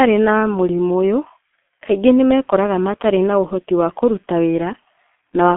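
From start to finish the speech carries the signature of the G.723.1 codec: nothing reaches above 3.8 kHz, and the band sits roughly between 200 Hz and 3.4 kHz. The damage is heavy, with a hoarse, muffled quality and smeared consonants, which points to a rate near 6.3 kbit/s. A plain telephone filter would dull the sound but keep it clean. Here the coarse 30 ms frames and slow updates also blur transitions into roughness.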